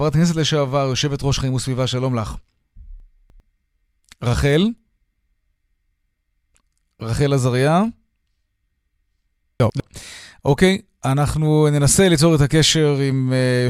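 At 3.0 to 3.4 s the speech jumbles briefly: chunks out of order, with one 100 ms chunk arriving three chunks late. At 9.6 to 9.8 s a chunk plays one position late. Each shows three hard joins.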